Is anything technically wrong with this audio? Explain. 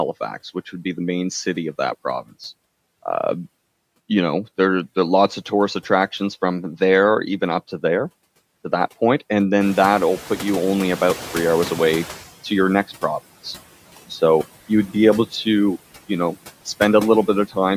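Yes. A noise suppressor cuts the background by about 16 dB throughout, attenuating each band it judges to be steady noise frame by frame, so the noise sinks between phrases and rises under the speech. Noise suppressor catching up: when the room noise jumps by about 19 dB around 9.5 s, the suppressor's noise estimate lags. From 9.6 s to 12.25 s the louder noise passes with reduced cutting, about 12 dB, and it sinks only as the estimate adapts over those 2.65 s.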